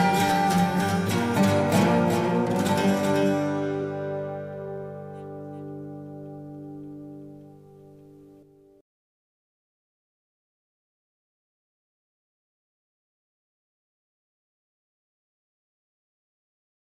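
A doubled audio track runs throughout: a full-band copy about 5 dB quieter trails by roughly 0.4 s, without echo's decay or room colour, likely from a second, slower capture path.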